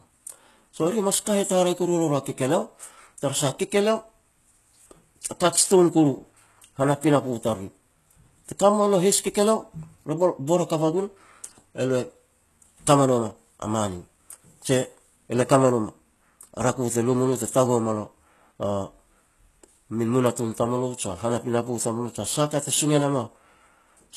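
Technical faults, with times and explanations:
Throughout, likely HE-AAC compression: nothing above 12.3 kHz, and treble rebuilt from copied lower bands makes s sounds gritty, which fits a bitrate near 16 kbps.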